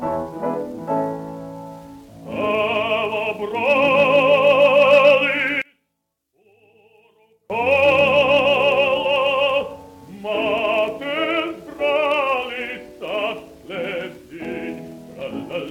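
Between 5.62 and 7.50 s the audio drops by about 32 dB, leaving only a faint ghost of the sound. The likely cause is one channel inverted: with one stereo side flipped in polarity, everything the two channels share cancels on mono summing, taking the centre with it. Unlike a dropout or mute, the level never reaches true silence. The residue is the inter-channel difference, heard as a faint copy.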